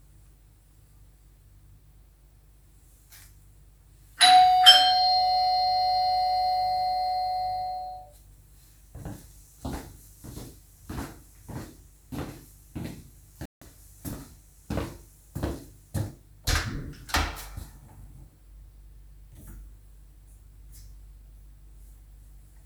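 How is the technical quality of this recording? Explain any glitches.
One glitch stands out, a digital broadcast dropout from 13.46 to 13.62 s. The receiver lost valid frames and muted, leaving a 160 ms silent hole consistent with about five frames discarded, before the sound resumes further on.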